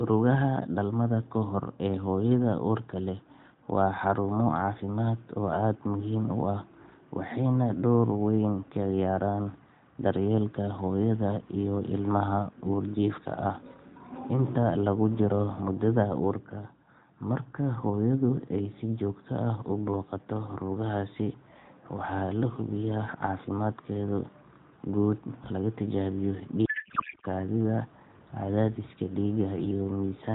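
From 26.66 to 27.26 s the receiver misreads the packing of the codec payload. The AMR frames appear to be sent octet-aligned but decoded as bandwidth-efficient, so each field sits in the wrong bit position and the decoder builds sound from the wrong parameters. For about 0.6 s the speech gives way to garbled noise and warble that barely tracks it, on top of the narrowband AMR sound that fits a 12.2 kbps mode.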